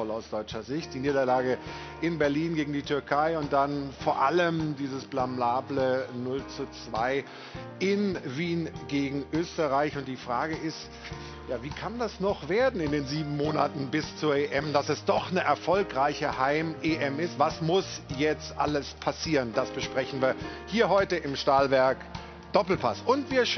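No technical faults can be heard anywhere in this audio. Nothing breaks, drops out or changes abruptly at any point.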